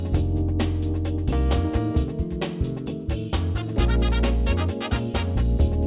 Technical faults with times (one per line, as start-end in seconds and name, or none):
none